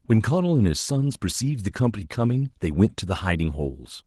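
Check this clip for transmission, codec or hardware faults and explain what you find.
Nothing here suggests a transmission, codec or hardware problem; the speech sounds like an ordinary Opus voice stream in full band, with just the light colouring that kind of coding brings.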